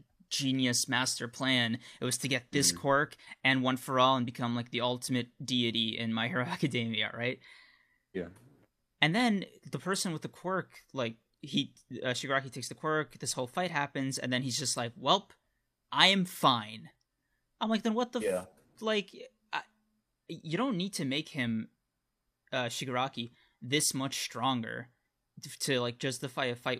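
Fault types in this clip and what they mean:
Resampler restarted on every block: Between 3.9 and 7.8 s, a steady tick pattern at 20 per second rides on the speech. This fits a 44.1 kHz to 48 kHz conversion run on separate 50 ms blocks with its filter state reset each time. At every block boundary the interpolator lacks the true adjacent samples, so a small discontinuity forms. The repeating errors fuse into a faint 20 Hz rattle that appears only where there is signal.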